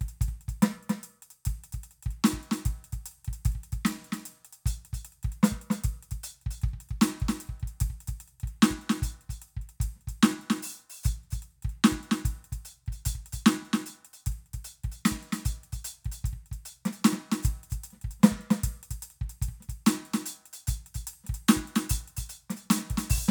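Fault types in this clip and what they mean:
Doubled audio track: the music plays twice throughout, with a second full-band copy trailing roughly 300 ms behind at about 5 dB lower. Unlike an echo or reverb, it repeats just once, with no decay or room colour, likely from a second, slower capture path.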